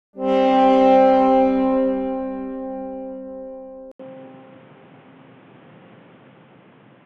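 The input likely switched to a poorer device at 3.92 s. After an 80 ms gap, the audio turns boxy, stops above 3.8 kHz, shifts a few decibels in level, and gains faint new background noise.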